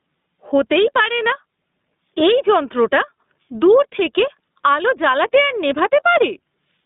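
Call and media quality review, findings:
Gain pumping, throughout the clip: gain pulled down on each loud sound, a level swing of around 15 dB. Likely cause: input gain set far too high for the mic, with a fast limiter or compressor clamping each peak. Loud and soft passages sit close in level, and the speech sounds squashed.

iLBC codec, throughout: speech is clear but rough and slightly synthetic, with plainly audible codec damage. Narrowband line of roughly 200 Hz to 3.7 kHz, nothing above. The texture fits 20 ms frames coded independently, consistent with iLBC's 15.2 kbps mode.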